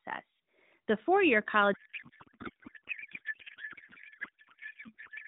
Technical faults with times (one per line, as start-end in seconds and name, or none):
1.74-5.27 codec payload misread